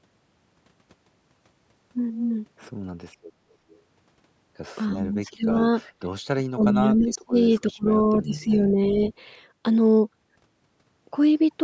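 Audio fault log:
3.69 to 8.58 s, echo leak: three brief scraps of delayed sound appear at 3.69 to 3.79 s, 6.63 to 6.67 s and 8.54 to 8.58 s, each trailing the original by 331 ms, at about 35, 15 and 20 dB below the main level. The likely cause is a loudspeaker on the far end whose echo canceller let some of its microphone pickup through. The fixed delay separates this from room reverberation, which would smear continuously rather than repeat as a discrete copy.
4.96 to 9.12 s, speech suppressed in double talk: the talker's level sinks in four stretches, at 4.96 to 5.64 s, 6.29 to 7.36 s, 7.61 to 7.89 s and 8.16 to 9.12 s. The deepest dips are roughly 35 dB at 6.29 and 7.61 s, roughly 20 dB in the first stretch and only about 10 dB in the last. This is likely an echo canceller that could not separate the local talker from loudspeaker sound while both sides were active, so it turned everything down. 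It is also distinct from the fixed 8 kHz band ceiling of the call's microphone processing.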